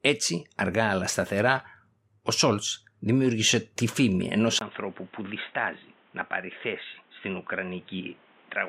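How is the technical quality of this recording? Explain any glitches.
The recording has one clear fault. At 4.59 s, after "δημιούργησε τη φήμη ενός", the input likely switched to a poorer device, bringing a brief 20 ms gap, then speech bandlimited to 3.8 kHz, somewhat quieter, with new background noise to the end.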